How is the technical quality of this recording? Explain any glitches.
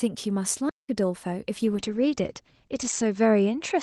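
The quality is uneven: there's a clear dropout early on, and the back half degrades noticeably.

From 0.69 to 0.89 s there's a playback stall. The speech cuts to silence for about 0.19 s mid-flow, then picks up again. It likely happened because the player's buffer ran dry or its thread got held up briefly.

From 1.63 s to the end there's a call bitrate drop. The encoder was squeezed onto far fewer bits, consistent with Opus falling from about 32 to 12 kbps. The top end narrows from 12 kHz to 8 kHz, so the speech turns muffled and rougher, worst for roughly the last 1.4 s.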